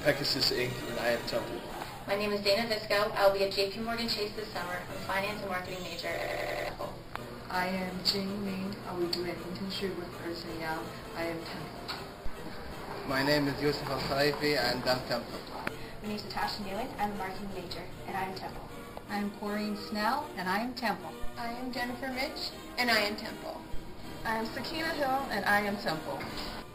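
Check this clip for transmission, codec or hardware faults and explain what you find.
One fault turns up. From 6.22 to 6.69 s the sound breaks into a machine-gun stutter at 10.8 Hz, with one 93 ms fragment repeating exactly five times. This is a system hang loop: the computer or driver stalled while the audio hardware kept replaying the same ring buffer, a length that fits a 4096-sample buffer. Roughly half a second of the real audio is missing.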